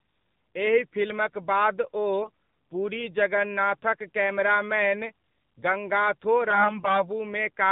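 From the start the speech carries the AMR narrowband mobile codec sound. Nothing above 4 kHz survives, so sibilants and consonant detail are dull and boxy. The codec damage is plainly audible: voiced sounds have a buzzy, synthetic edge because a vocal-tract model driven by sparse pulses stands in for the real waveform. That degree of coarseness fits one of the lower AMR-NB modes, around 7.4 kbps.

AMR bit errors occur twice: briefly from 2.22 to 2.30 s, then longer from 6.50 to 7.10 s. In both stretches the voice keeps roughly its pitch and loudness but turns hoarse, scratchy and gargly. The frames were decodable, but their less protected fields were corrupted, scattering the excitation pulses and skewing gain and spectral detail. The roughness points to a heavy error rate on those bits, on the order of one in ten.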